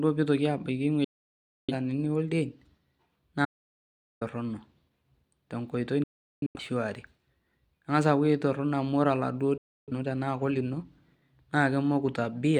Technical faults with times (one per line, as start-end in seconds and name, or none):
1.04-1.74 digital broadcast dropout
3.45-4.21 audio dropout to silence
6.03-6.60 digital broadcast dropout
9.58-9.93 digital broadcast dropout